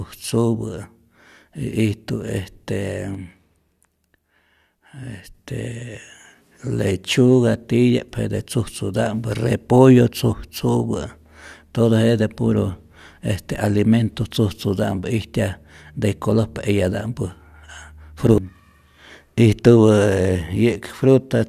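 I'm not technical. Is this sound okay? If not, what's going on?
No. From 3.15 to 5.34 seconds there is a sudden gain jump: the speech and the background noise both drop noticeably quieter at once, then snap back. This is likely a volume setting applied instantly rather than faded in and out.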